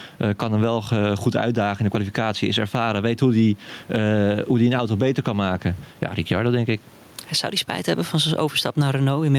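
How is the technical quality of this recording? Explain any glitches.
The recording is marred by gain pumping that runs through the whole clip. Throughout, the gain swings by around 10 dB. The likely cause is input gain set far too high, with a fast limiter or compressor clamping down on each loud syllable and releasing in the gaps. Loud and quiet passages end up squashed toward a similar level. On a waveform the envelope looks flattened, and the low-level floor rises visibly between phrases. On a spectrogram the broadband noise band brightens in each gap and darkens under speech. The room noise itself sits about 38 dB below the speech.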